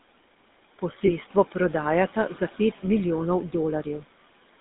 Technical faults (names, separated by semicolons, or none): noise suppressor artifacts; GSM full-rate codec; lost GSM frames